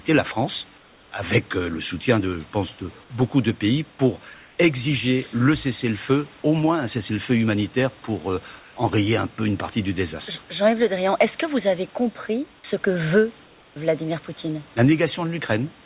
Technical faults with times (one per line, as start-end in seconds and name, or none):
0.78-1.12 comfort noise in place of the background
6.42-6.44 sound dropped by the voice detector
8.60-8.76 comfort noise in place of the background
13.46-13.76 comfort noise in place of the background